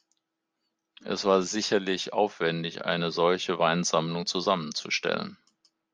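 A short speech recording, and no technical fault can be heard in it. There is nothing here that needs a time or a cause.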